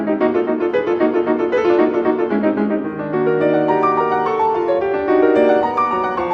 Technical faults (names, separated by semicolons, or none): clock slip clicks